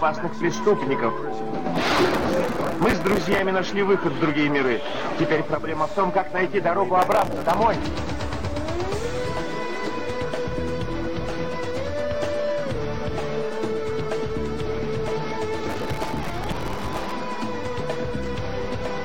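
Processor overload crackle appears three times: from 1.8 to 3.4 s, from 7.0 to 7.6 s, and from 15.7 to 17.1 s. In each stretch the processor repeatedly misses deadlines on very short buffers, on the order of a few milliseconds. Each missed buffer is filled with stale audio whose edges don't line up with the signal, so the result is a dense, gritty tearing over the sound that clears as soon as the load drops.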